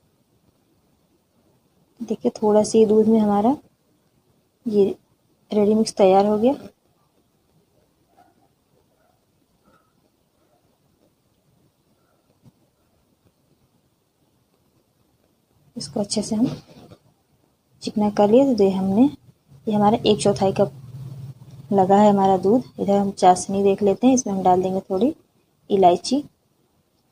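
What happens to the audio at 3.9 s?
Nothing goes wrong at 3.9 s: the audio plays through that moment without any dropout, click, distortion or other audible fault.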